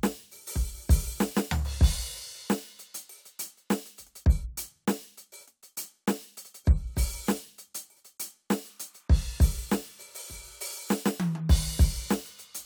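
Linear timecode running at 29.97 frames per second leaks into this music clip from 8.67 s to the end; this timecode bleed adds a faint chirping warble near 1 and 2 kHz, roughly 40 dB below the music.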